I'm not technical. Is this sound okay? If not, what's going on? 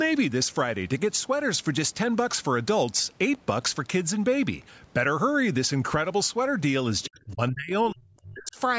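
No. At 4.84 s there is one sharp tick, a bit error spike: a single stored value was corrupted for an instant, unrelated to the speech itself. From 7.05 to 7.71 s and again from 7.91 to 8.58 s, the voice sinks and partly disappears, more deeply the second time. That is likely speech suppressed in double talk: the call's echo control turned this talker down while the other side spoke.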